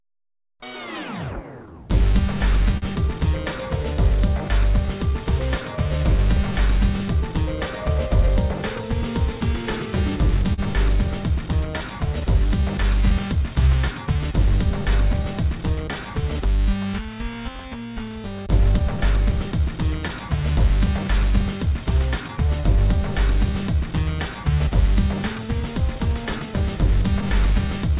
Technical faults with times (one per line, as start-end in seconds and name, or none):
0.00-28.00 clock drift between sender and receiver
0.04-27.92 repeated timing corrections
2.77-2.84 short stall from a late packet
10.54-14.22 scattered short gaps
20.08-23.36 scattered short gaps